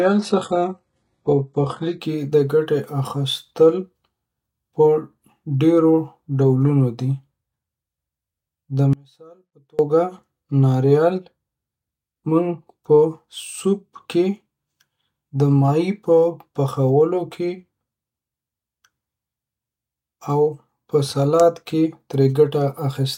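Adaptive stream starting at a low bitrate, from 0 to 2.0 s: the player opens on a cheap, low-bitrate version to start quickly, then switches up once it has gauged the connection. Until then nothing sounds above 11.1 kHz, the upper range has a synthetic, swirly quality, and codec artefacts are stronger, which fits an HE-AAC stream near 12 kbit/s. Fuller AAC-LC quality then arrives abruptly, with no gap.

Audio dropout to a faint residue, from 8.93 to 9.79 s: the speech cuts out sharply for 0.86 s and comes back mid-flow. The gap is not silent but holds only a faint trace of sound, roughly 30 dB below normal level. The likely cause is the wanted signal being lost while the downstream path stayed live.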